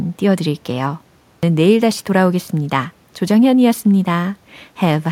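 At 1.29 s, speech comes back after a pause of about 0.31 s, and its opening is missing. This is a clipped start after a pause. The output path went idle during the silence and had to wake before it could pass sound again. That took about 0.14 s, so the first 139 ms or so of the returning speech never reached the output. The sound starts abruptly out of silence, without its first sounds.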